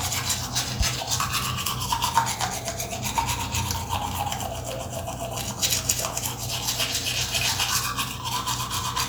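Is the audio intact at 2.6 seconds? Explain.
No. At 2.6 seconds, as across the whole clip, there is mains hum: a ground loop or a nearby transformer is letting the 60 Hz power line leak into the signal path. That adds a steady low tone at 60 Hz, with some low harmonics above it, sitting under the audio at roughly 10 dB below the wanted sound.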